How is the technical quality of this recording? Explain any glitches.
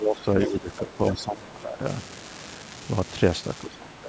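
The recording has three distinct faults, layered over speech that carries nothing above 8 kHz.

An unreliable data bit runs throughout: one marginal data line flips at random, adding equal-sized spikes heard as a constant fizzy crackle, even in pauses.

Speech suppressed in double talk occurs from 0.00 to 0.25 s, 0.46 to 1.84 s, and 3.61 to 4.08 s. The voice dips by about 15 to 20 dB, likely because the echo canceller turned everything down while both sides spoke.

The other side's voice leaks through from 0.19 to 0.23 s as a faint, brief scrap far below the talker, likely loudspeaker echo the canceller failed to remove.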